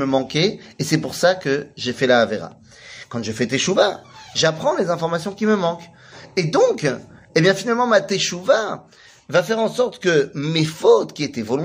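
Nothing in the signal points to a technical fault at any moment.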